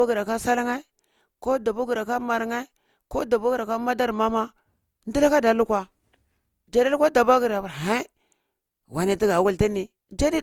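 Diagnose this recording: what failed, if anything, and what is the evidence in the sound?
Codec stage. Across the whole speech clip the sound is swirly and hollow, with smeared consonant attacks and a watery texture that is heavier than a single pass at this quality would leave, even though content still reaches about 20.2 kHz. This is likely generation loss from repeated lossy coding, consistent with Opus at around 64 kbit/s applied about five times. Each decode and re-encode quantises on a shifted frame grid, so the noise from each pass stacks up.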